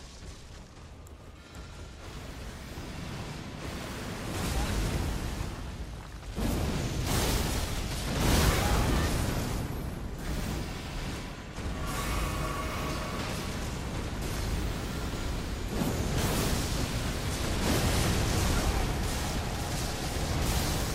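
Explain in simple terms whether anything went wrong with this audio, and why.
Nothing went wrong with this audio. No dropouts, glitches or other technical faults can be heard anywhere in it.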